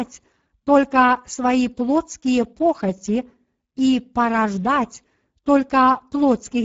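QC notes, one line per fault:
Throughout, Speex codec: CELP coding starved of excitation bits leaves speech hoarse and noisy, fitting roughly 10 kbps, with nothing above 7.7 kHz.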